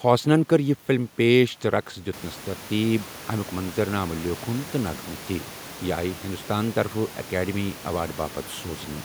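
Nothing here points to a technical fault, just the room's own background noise stepping up by about 12 dB around two seconds in and then sitting about 21 dB below the speech, which is simply part of the recording.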